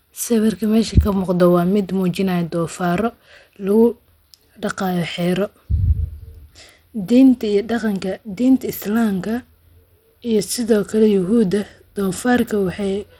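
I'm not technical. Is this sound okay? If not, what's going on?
No. From start to finish the speech sounds dull and gritty, as if heard through a cheap wireless earpiece: the crisp top end is thin or flickers in and out, and a rough hiss clings to the sound. This is likely Bluetooth SBC compression, the basic codec many wireless headphones use. To squeeze audio into a small data allowance, it gives the highest frequencies little or nothing and rounds off the rest coarsely.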